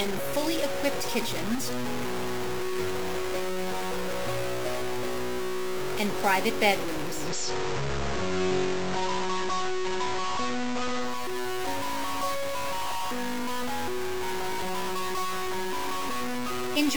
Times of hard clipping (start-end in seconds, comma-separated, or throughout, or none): none